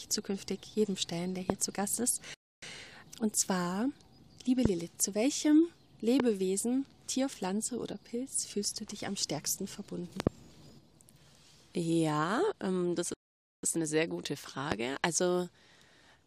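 At 1.50 s a loud pop jumps out, a single sharp click standing roughly 20 dB above the surrounding sound, with the audio continuing unbroken underneath. That continuity is what separates it from a dropout or a stall: something is added on top rather than taken away. The likely cause is a brief voltage pulse entering the chain, from a switch, a static discharge or a driver glitch, which the downstream circuitry turns into a click.

From 2.34 to 2.62 s a playback stall cuts in. The sound stops in mid-flow and the output falls silent for about 0.28 s. It then resumes. Unlike a pop, nothing extra is heard. The fault is an absence, most likely the player running dry of data or its audio thread being held up until it could catch up.

More pops of the same size and character follow at 4.65 s and 6.20 s. Between 10.20 and 10.29 s the pop comes as a pair of clicks in quick succession, as a pulse and its rebound would sound, still riding over the continuing audio.

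A longer stall runs from 13.14 to 13.63 s, a silence of about half a second before the sound picks up again.

A final single pop lands at 14.72 s, again roughly 20 dB above the sound, with the audio carrying on beneath it.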